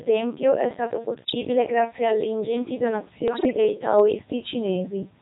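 Throughout, the speech passes through the Codec 2 vocoder at 3.2 kbit/s. Only pitch, voicing, energy and a coarse spectral envelope survive, and the decoder rebuilds the voice from sine waves. The result is heavily robotic and buzzy, with the original waveform gone.

Bit errors on digital voice radio strike twice. The first runs from 1.14 to 1.35 s, between "tempio è stato" and "grazie alle ingenti", at an error rate of several percent. The second, at a lower error rate of about 4 percent, runs from 3.28 to 3.57 s, just after "grazie alle ingenti". In both, flipped bits corrupt the frame parameters, so the synthetic voice lurches in pitch, level and timbre and breaks into warbling, bleeping gibberish.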